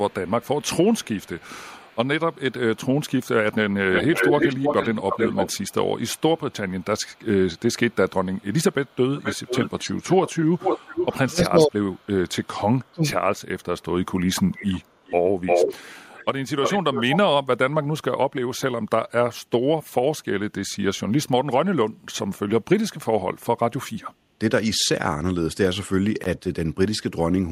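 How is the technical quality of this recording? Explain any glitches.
The speech recording has two recurring call-processing faults: four stretches of echo leak and two brief dips from speech suppression during double talk.

Echo leak is heard from 0.1 to 1.97 s, 3.24 to 5.73 s, 9.16 to 12.01 s and 14.51 to 17.18 s. A delayed copy of the speech trails behind it, most likely because a far-end loudspeaker signal got past an echo canceller and was sent back. The lag is 182 ms in the first stretch, then 327 ms, 479 ms and 352 ms. The first echo is very faint, about 35 dB down. The others are loud, at about 5 dB, 10 dB and 5 dB below the speech, so they clearly smear and double the speech.

Speech suppressed in double talk occurs at 11.48 to 11.77 s and 12.91 to 13.14 s, each affecting roughly a fifth of a second. The first dip overlaps the third echo stretch. The speech level drops sharply, by about 25 dB and then about 30 dB, so the talker briefly dips. 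The likely cause is an echo canceller that could not separate the local talker from the returning echo while both sides were active, so it attenuated everything.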